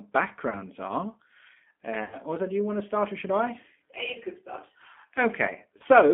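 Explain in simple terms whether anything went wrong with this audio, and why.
The whole recording went through the G.729 codec, a squeezed phone-call codec that drops everything above about 3.4 kHz, so the speech sounds dull, rough and a bit synthetic.

There's also VoIP packet loss concealed by the speech codec: bits of audio went missing around 0.50–0.60 s, 2.04–2.17 s (just before "do you want to"), 4.13–4.17 s (just before "you could start") and 5.78–5.83 s. The decoder patched each gap with a fading guess, which stays smeared briefly afterwards, and the longest patch is the 80 ms one at about 2 s.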